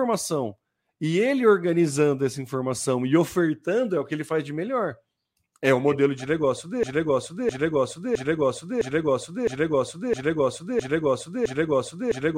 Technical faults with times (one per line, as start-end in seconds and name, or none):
6.83-12.38 broken-record loop